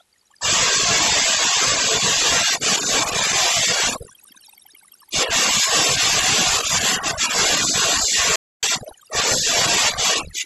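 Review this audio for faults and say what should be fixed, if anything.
The whole clip has overdone noise removal. The noise reduction was pushed too hard, so any frequency band sitting near its noise estimate got pulled way down or switched off, and the quieter parts of the speech went along with them. You're left with a near-silent background full of twinkly specks. To prevent it, back off the reduction amount and let a little natural room noise remain.

There's also a playback stall from 8.36 to 8.63 s, where the audio just drops out for about 271 ms mid-flow. It sounds like the player likely ran dry of data or had its thread blocked, leaving the output silent until it caught up. To prevent it, give the playback path a bigger buffer and keep the audio thread clear of blocking work.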